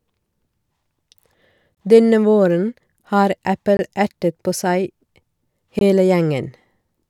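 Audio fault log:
1.75–1.77 s, 3.77–3.79 s, 5.79–5.81 s: gap between chunks. The speech was delivered in 2.0 s chunks, and each join carries about 21 ms of inserted silence, which fits codec padding or a player starting each chunk late. Nothing is lost, but the speech drops abruptly to silence and resumes with hard edges, so three short, evenly spaced holes punctuate the clip at a steady 2 s rhythm.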